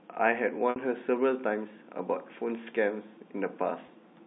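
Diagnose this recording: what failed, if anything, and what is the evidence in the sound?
Packet loss with pitch repetition on the network path: the receiver filled each gap by repeating the last pitch period and fading it over about 50 ms. At 0.70 to 0.76 s, a 60 ms hole, which fits three 20 ms packets, the speech freezes into a buzzy held tone that dies toward silence before cross-fading back. At 3.86 to 3.88 s a 20 ms loss gives only a brief buzzy hold, heard over the narrow G.711 telephone band.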